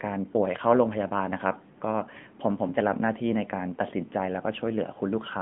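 From start to finish the speech sounds thin, boxed-in and buzzy, with nothing above about 3.7 kHz and little below 150 Hz. This is the AMR narrowband mobile codec: the plainly audible synthetic edge fits a mid-rate mode near 10 kbps.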